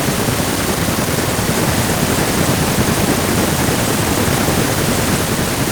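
An echo canceller likely mistook overlapping talk for echo and clamped it: speech suppressed in double talk drops by as much as 40 dB at 1.67–2.21 s, 2.39–3.55 s, and from 4.09 s to the end.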